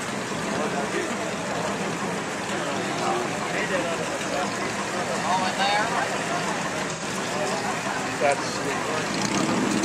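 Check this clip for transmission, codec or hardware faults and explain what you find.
Two short dropouts show AAC frame loss with concealment: at 2.23–2.29 s and 6.92–7.03 s, the decoder patches missing frames from earlier spectrum, leaving brief smeared, noisy-sounding gaps.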